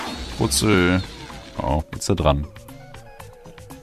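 At 1.79 to 1.83 s the audio lurches forward, losing roughly 150 ms. This is compressed frames skipped: whole coded frames never reached the output.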